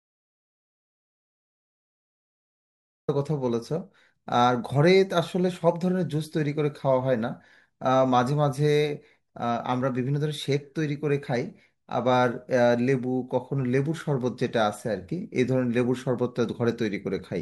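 The clip opens in silence that lasts until about 3.08 s, an audio dropout to silence already under way when the recording begins. There is no room tone or noise floor at all, and then the speech arrives abruptly rather than fading in. This likely comes from a lost input, such as a disconnected source or a mute, while writing continued. The waveform shows a dead-flat line, and the spectrogram is blank until 3.08 s.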